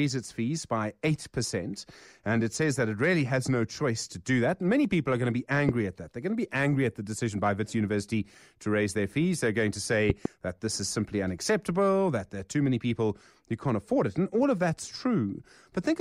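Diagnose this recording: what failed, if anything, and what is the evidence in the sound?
Loud pops at 5.69 to 5.71 s, after "are going to be", and a double pop at 10.10 to 10.28 s, before "that this is simply". A voltage pulse, likely from a connector or switch in the analogue wiring, rides over the speech, peaking about 20 and 15 dB above it.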